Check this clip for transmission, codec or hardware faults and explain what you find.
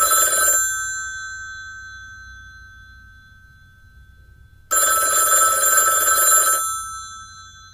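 Nothing in this recording of sounds points to a transmission, codec or hardware problem.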